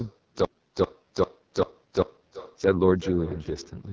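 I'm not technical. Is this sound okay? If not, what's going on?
No. Two problems run through the whole clip.

First, every word comes back a little under half a second later as a fainter, thinner copy. This is echo with no canceller. On the other end of the call, the audio played through a loudspeaker, that phone's microphone picked it up again, and nothing removed it, so it travelled back over the network behind the original.

Second, the speech itself sounds rough, raspy and buzzy, with a grainy, artificial edge, heavily damaged rather than just muffled. This comes from the AMR wideband (HD Voice) codec, the system that squeezes call audio into a small amount of data. Here it is running at one of its lowest-quality settings, where it can no longer rebuild the speech cleanly and leaves this harsh texture behind. The call's normal microphone processing can also be heard in the missing deepest bass, which is expected and isn't a fault.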